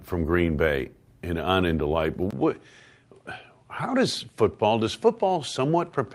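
At 2.31 s the speech drops out for about 20 ms, then returns duller, with nothing above 11.4 kHz and a new noise floor roughly 50 dB down, at much the same level, to the end. The likely cause is an input switched to a poorer device.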